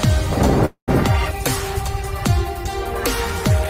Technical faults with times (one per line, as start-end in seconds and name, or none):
0.65-0.90 call audio freeze